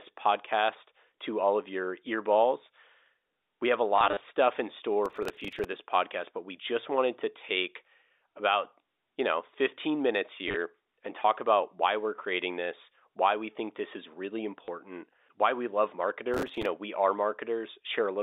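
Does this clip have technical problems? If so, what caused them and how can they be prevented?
Yes, there are two kinds of problems here, both riding on a telephone-band signal that itself sounds clean.

Packet loss with the last packet repeated shows up at 3.96 to 4.2 s, between "have a" and "stuff in". About 150 ms goes missing in short runs of up to 30 ms scattered over 240 ms. It shows up again at 10.48 to 10.56 s, just before "and talk about why", with 50 ms lost over 80 ms, and once more at 14.65 to 14.68 s, a single 30 ms gap. Each time the receiver replays the previous chunk, which sounds like it's working in 10 ms packets, so the longer runs buzz at around 100 Hz, giving that brief robotic stutter. A proper jitter buffer plus forward error correction or real packet loss concealment would smooth these over.

Processor overload crackle hits at 5.06 to 5.65 s, right after "stuff in" and ending before "of this podcast but", and again at 16.34 to 16.66 s. 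Something in the chain couldn't keep up with its tiny buffers, only a few milliseconds each, and missed roughly twenty deadlines over each stretch. Each miss replays a scrap of stale audio with hard edges, so the bursts come out as a gritty tearing over the speech that stops once the load eases. Bigger audio buffers, a lighter CPU load and real-time priority for the audio thread would stop it.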